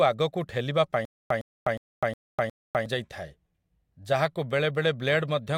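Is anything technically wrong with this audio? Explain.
Yes. From 1.05 to 2.86 s there is stutter with silent gaps: a 108 ms fragment of speech repeats five times, each followed by about 253 ms of digital silence, every 361 ms. This is likely a stalled stream replaying its last buffer. Unlike echo or dropouts, it is identical repeats with dead silence between.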